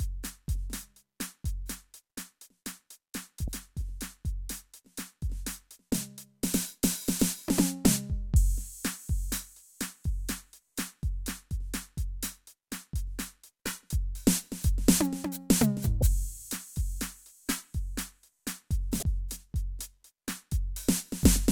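A music clip with damaged data in the compressed stream. Brief glitches break through at 3.45 to 3.48 s, 15.99 to 16.02 s and 18.99 to 19.03 s, each about 30 ms long. Corrupted frames there make the decoder lose sync and hunt for the next valid frame.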